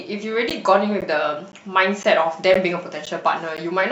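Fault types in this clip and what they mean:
Gap between chunks: 12 ms hard-edged silences recur every half second at chunk joins; unlike dropouts, no speech is lost, only pushed later.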